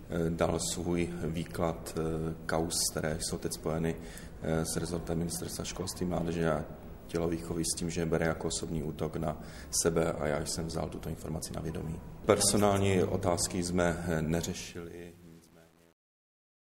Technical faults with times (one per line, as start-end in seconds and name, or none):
14.40-16.61 truncation distortion on a fade